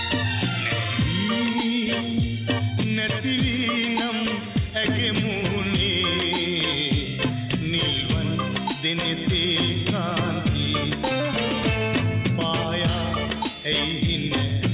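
No technical faults can be heard anywhere in the clip. The sound comes through a call path whose bandwidth stops at 4 kHz, which fits a G.711 mu-law codec running at 64 kbps.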